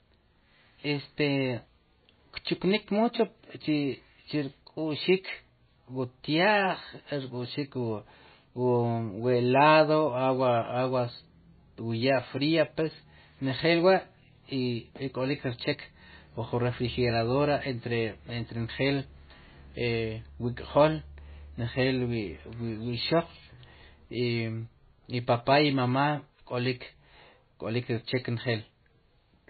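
From start to finish the speech has nothing above 4.5 kHz and a watery, swirling texture, with sibilants turning metallic. This is likely heavy MP3 compression: starved of bits, the encoder cut the treble and let weak frequency lines flicker between frames, which points to a bitrate near 18 kbps.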